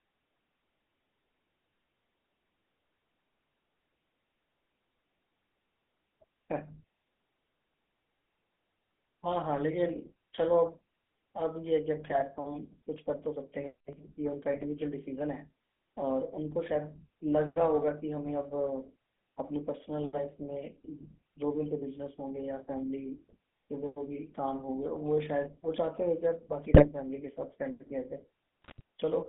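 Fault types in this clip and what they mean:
GSM full-rate codec: The 13 kbps GSM full-rate codec rebuilds the voice from a vocal-tract model excited by sparse regular pulses, over a line band of 200 Hz to 3.5 kHz. Throughout, the speech sounds narrow, buzzy and gravelly, with plainly audible coding roughness.
GSM bit errors: Corrupted bits on a weak radio link reached the decoder, scrambling filter, pitch or gain values for a few frames at a time. Brief squawks, pops and gargling break the speech at 12.04 to 12.23, 14.54 to 14.65, 26.71 to 26.86 and 28.62 to 28.81 s.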